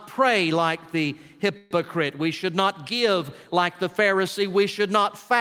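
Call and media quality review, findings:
Call audio freeze at 1.57–1.73 s: last sound stretched into a short fading buzz or hiss for about 134 ms, then playback resumes where it left off, nothing lost. Likely late packets draining the jitter buffer, with the receiver padding the gap. Net effect: latency jumps by about 134 ms from there on.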